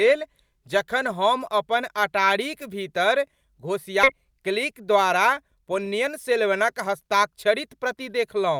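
At 4.03 s the speech lurches forward with no audible gap, and about a second and a half of talk simply vanishes. This is a skip ahead: a stretch of audio was discarded while later audio was already waiting, probably on the way or by an overflowing jitter buffer, and the two sides were butted together.

From 4.16 s to 7.96 s the speech sounds slightly rushed while its pitch stays put, running at about 106% speed. This jitter buffer speed-up comes from the receiver trimming many short pitch-period slices, about a fifth of a second in total, to shrink its excess delay.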